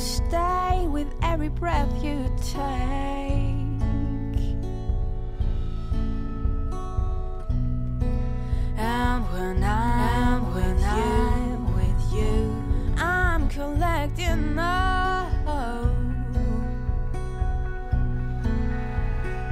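From 9.89 s to 13.49 s a doubled audio track appears: a second full-band copy runs about a second behind at roughly equal loudness, likely from a slower capture path. Unlike echo or reverb, it has no decay or room colour, and it starts and stops abruptly.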